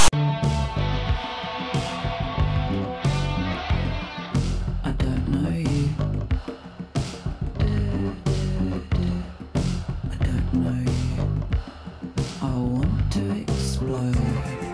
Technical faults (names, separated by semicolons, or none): file tags played as audio